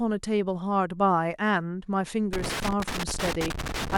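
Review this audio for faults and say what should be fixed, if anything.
Loose connector crackle runs from 2.33 s to the end of the speech clip, an irregular burst of scratching and crackle over the last 1.6 s or so. A worn or dirty contact in the signal path is making and breaking as the cable or plug shifts, so the signal is repeatedly chopped, and any DC present on the line turns each break into a pop. To prevent it, clean or replace the affected connector and strain-relieve the cable so it cannot move at the plug.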